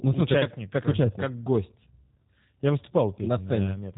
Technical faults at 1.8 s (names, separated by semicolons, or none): G.729 codec